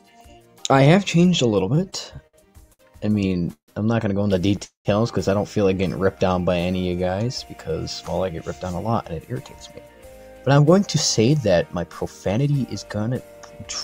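The audio stutters between 1.75 and 3.71 s. These are repeated stalls (stutter): the buffer ran dry 14 times, filling about 406 ms, longest gap 148 ms. From 4.65 to 4.88 s it freezes, holding the last sound and then going silent for 130 ms. Nothing is lost. This call audio freeze adds 200 ms of delay, likely from packets held up in transit. From 6.03 to 7.73 s a jitter buffer slow-down stretches the sound to 90% speed, adding 186 ms at unchanged pitch. From 10.43 to 13.63 s a jitter buffer speed-up runs at 106%, trimming about a fifth of a second and sounding hurried.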